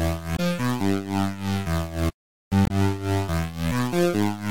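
A short recording of sounds with two bursts of damaged data in a compressed stream, at 0.33 to 0.40 s and 2.63 to 2.71 s, each lasting about 70 to 80 ms. Corrupted bytes make the decoder misread frames and lose sync, so each spot is heard as a brief chirp, squawk, click or short hole. On a spectrogram these show as abrupt broadband or smeared blocks unrelated to the surrounding sound, with hard edges at the frame boundaries in the waveform.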